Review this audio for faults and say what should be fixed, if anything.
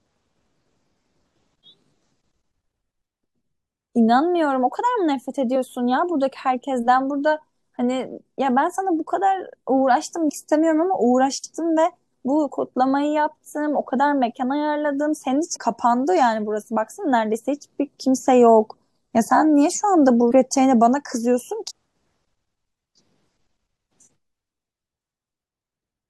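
Damaged data in a compressed stream causes brief glitches at 5.55, 10.28–10.30, 15.55, 20.31 and 21.70–21.72 s. The decoder misreads corrupted frames and resynchronises. Prevention: verify file integrity with checksums and use error-protected transport or storage.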